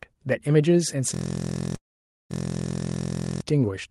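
At 1.14 s the system froze while the sound hardware kept replaying its ring buffer, a system hang loop. The same 23.22 ms slice, which fits a 1024-sample buffer, repeats 74 times until 3.41 s, heard as a steady buzz at 43.1 Hz.

From 1.75 s to 2.33 s there is a call audio freeze, likely from packets held up in transit draining the jitter buffer. The last sound is stretched briefly, then 500 ms falls silent, adding a 543 ms gap with nothing lost.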